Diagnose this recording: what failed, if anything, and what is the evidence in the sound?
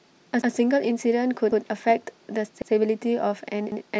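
Brief stutters at 0.42, 1.52, 2.62 and 3.72 s each replay 100 ms of speech: overlapping chunks in buffering, each 1 s chunk starting before the previous one ends.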